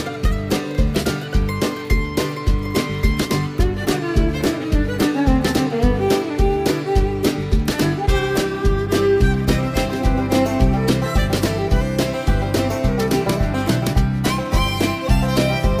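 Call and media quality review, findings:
No audible faults found in this recording.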